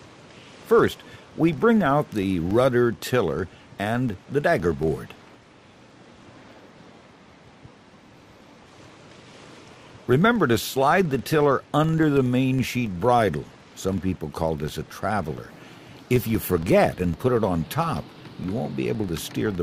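Throughout the clip a regular ticking runs at about 21.5 per second, a low buzz whose strength rises and falls with the level of the sound. This is a filter restarted on every block: it drops its state at each block boundary and starts from silence, so every block opens with a small transient. The rate fits a 2048-sample block.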